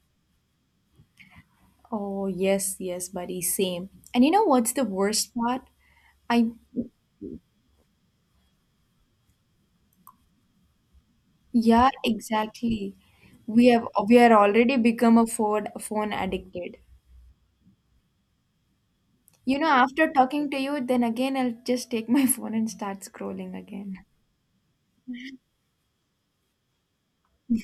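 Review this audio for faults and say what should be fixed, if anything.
Nothing in the signal needs fixing, as the recording shows no technical faults.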